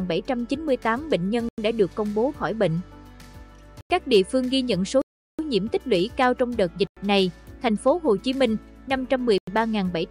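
Blocks of digital silence cut in at 1.49–1.58 s, 3.81–3.90 s, 5.02–5.39 s, 6.87–6.97 s and 9.38–9.47 s. The output buffer likely went unfilled, so the sound drops abruptly to silence and returns with no fade. The 93 ms holes fit a 4096-sample buffer, and the 372 ms gap fits four missed buffers in a row.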